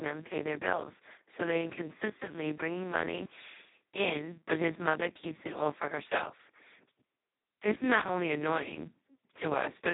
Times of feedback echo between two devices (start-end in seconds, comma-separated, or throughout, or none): none